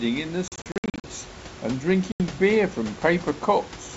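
From 0.48 to 1.07 s there's packet loss on the ADPCM call: 320 ms goes to hard-edged silence in gaps up to 60 ms long. The decoder's predictor and step size drift from the sender's, so the sound returns slightly distorted. Then it repeats as one 80 ms hole at 2.12 to 2.21 s.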